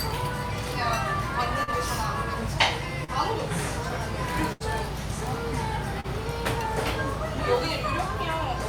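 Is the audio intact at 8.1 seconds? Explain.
Yes, at 8.1 seconds the sound plays through intact, with no fault at that moment.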